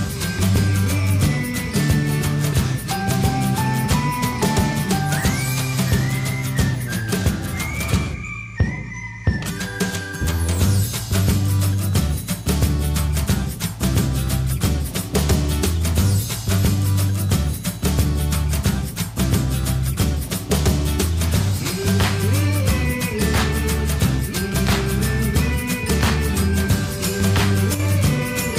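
At 27.75 s, near the very end, the level drops suddenly by about 6 dB. It stays down for only 50 ms and recovers at 27.80 s. The dip is abrupt, heard as a brief flicker rather than a fade. The likely cause is one channel drops out. One side of the stereo signal briefly goes silent. After the mono sum, content shared by both sides loses half its level. Anything carried only on that side vanishes for the moment.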